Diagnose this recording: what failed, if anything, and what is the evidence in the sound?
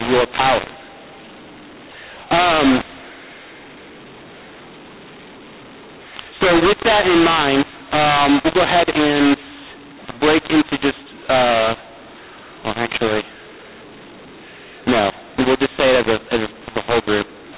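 The fault is at the codec stage: mu-law and A-law mixed up, with A-law bytes decoded as mu-law. Throughout the speech, levels come out scrambled and harsh, and pauses fill with hiss. Ordinary G.711 quantisation noise would stay faint, about 38 dB down, and drop away in pauses.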